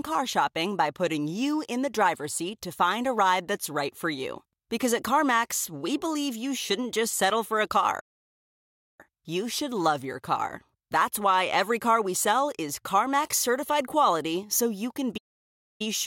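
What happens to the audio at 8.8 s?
At 8.8 s the audio sits inside a playback stall running from 8.00 to 9.01 s, likely caused by the player running short of data or having its thread blocked. The speech cuts out after "just settle for a", stays silent for about 0.98 s, then resumes with "you should love your".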